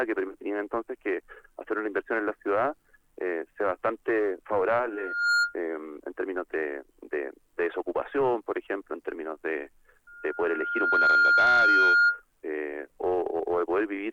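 At 4.89 s a loudspeaker feedback squeal builds up in under half a second: a steady 1.4 kHz tone swelling over the sound until it's cut at 5.56 s. The mic is hearing its own speaker and the loop runs away at that frequency. It returns at 10.07 s, climbs more slowly over about a second to roughly 10 dB above the sound, and howls until 12.23 s.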